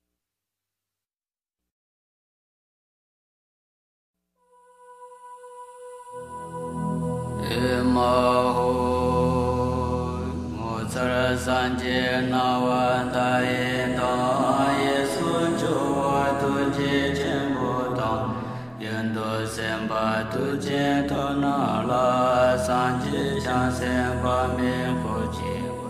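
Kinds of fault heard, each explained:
No kinds of fault are heard in this clip.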